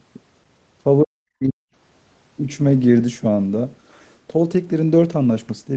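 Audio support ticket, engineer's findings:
Speech ducks hard, 1.04 to 1.61 s: level falls by up to about 40 dB, roughly half a second in all. Likely cause: speech suppressed in double talk, with the echo canceller mistaking near-end speech for loudspeaker echo and attenuating both. Nothing above 8 kHz throughout, which fits wideband Opus around 24 kbps through the WebRTC call path.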